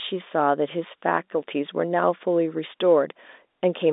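No faults present; the speech sits in a telephone band of roughly 250 Hz to 3.7 kHz with nothing above 3.8 kHz, consistent with G.711 A-law telephone coding at 64 kbps.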